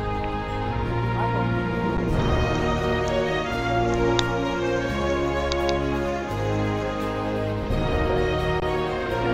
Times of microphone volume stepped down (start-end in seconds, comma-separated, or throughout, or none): none